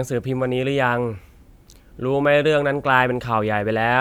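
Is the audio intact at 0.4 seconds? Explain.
Yes, the audio is intact at 0.4 seconds, with no audible fault in the speech at that point.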